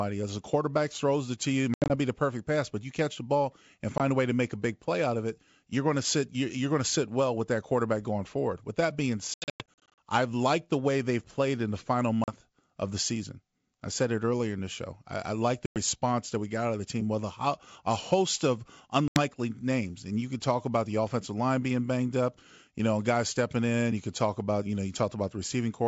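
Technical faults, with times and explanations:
1.74–1.93 s (after "it to you it"), 3.98–4.01 s, 9.34–9.99 s, 12.24–12.33 s, 15.66–15.78 s, 19.08–19.19 s: packet loss on an ADPCM call. Dropped packets leave hard-edged silent gaps, from 20 ms to 380 ms scattered across 9.34–9.99 s. The decoder's predictor and step size lose step with the sender's, so the audio returns slightly distorted before settling.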